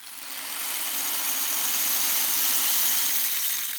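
No technical faults can be heard anywhere in these sounds, so there is nothing to describe in time order.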